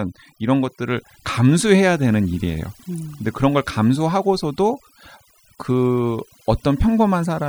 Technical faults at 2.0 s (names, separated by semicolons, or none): overdone noise removal